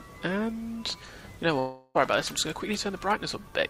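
Audio with a long network dropout from 1.59 to 1.97 s, where roughly 0.36 s is lost and concealment fills the gap with a fading buzz, likely from a stalled stream.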